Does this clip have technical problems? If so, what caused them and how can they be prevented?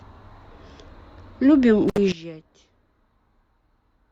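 Yes. An intermittent contact at 1.88 to 1.98 s cuts the speech for about 63 ms, with crackle at the edges and faint hiss in the gap. Unlike a clean digital dropout, the gap isn't silent. Secure or replace the loose cable or plug.

A sudden gain jump at 2.12 s drops the speech and the background noise together by about 16 dB and stays there to the end. An automatic level control would move more slowly, so this was likely a gain setting applied without a ramp. Ramp every gain change over a few milliseconds.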